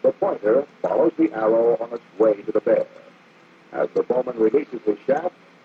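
No faults to report; the audio runs without a break, glitch or level problem anywhere along its length.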